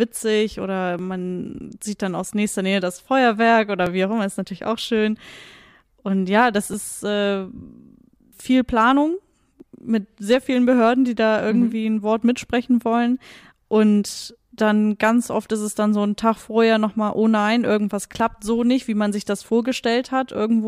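Two independent clocks, likely about 500 ppm apart, let the buffer between them drift until roughly 70 samples are dropped or repeated. This clock drift buffer slip recurs every 2.87 s from 0.99 s to 18.2 s, about seven times, as a click in the speech.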